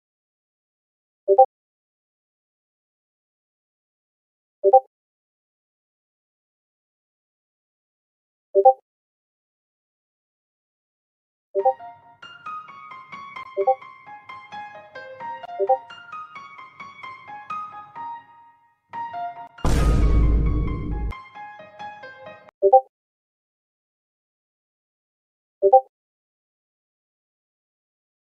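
At 1.44 s there is a skip ahead: roughly half a second of audio is lost in transit or discarded on buffer overflow, and playback jumps straight forward with no gap. On a waveform and spectrogram, two stretches butt together at an abrupt seam.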